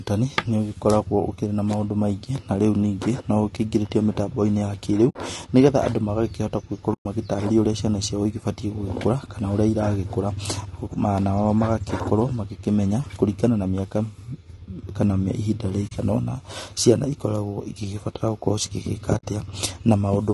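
Low-delay AAC compression runs through the whole speech clip. The sound is rough and grainy, with noise filling the gaps between pitch harmonics and a top band that sounds thin and synthetic. This is likely AAC-ELD coding at a low bitrate, which fits roughly 32 kbps. Its short frames resolve harmonics poorly and use bits less efficiently, so at this rate the coding damage is plainly audible.

AAC frame loss with muting occurs at 5.09 s (about 60 ms), 6.93 s (about 120 ms, the longest), 15.87 s (about 40 ms) and 19.17 s (about 60 ms). Each time, the decoder lost frames and replaced their spectrum with silence. The overlapping windows fade the sound out and back in, so each gap is a soft-edged hole.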